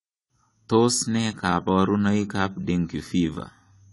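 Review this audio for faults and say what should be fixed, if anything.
The speech lacks everything above 11.5 kHz for its whole length, with plainly audible smearing. This is likely AAC compression, consistent with about 32 kbps. Encode at a higher bitrate.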